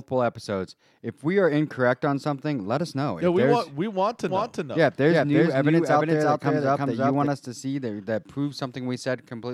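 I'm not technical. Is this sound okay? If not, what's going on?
No. From 4.29 to 7.27 seconds, after "want we want to", there is a doubled audio track. The speech plays twice, with a copy about as loud trailing about 0.4 seconds behind. It stops abruptly before "us to see that". Likely an editing slip left two copies.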